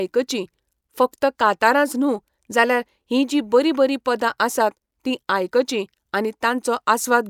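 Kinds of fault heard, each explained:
No faults detected.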